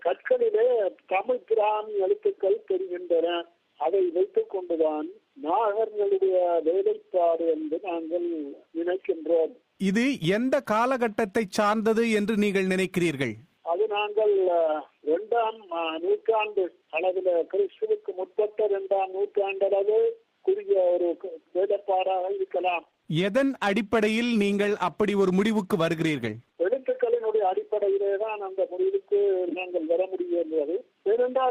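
From 22.6 to 26.6 s the sound suddenly degrades, with codec artefacts swelling, then full quality snaps back with no gap. This is an adaptive stream at a lower bitrate, dropping to what sounds like roughly 16 kbit/s Opus while the connection slowed.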